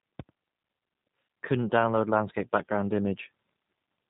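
From start to finish, the speech carries plainly audible G.729 codec damage. The codec rebuilds each 10 ms frame from a vocal tract filter, a pitch predictor and a few pulses. It does not keep the actual waveform. Nothing above 4 kHz survives, so the sound is dull and boxy. The voice stays intelligible but comes across rough and slightly synthetic. The degree of coarseness fits an 8 kbit/s codec.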